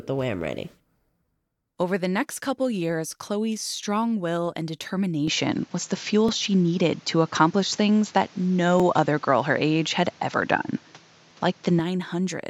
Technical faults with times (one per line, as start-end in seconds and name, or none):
3.77 overlapping chunks
5.28-11.79 input switched to a poorer device
6.28 overlapping chunks
8.80 overlapping chunks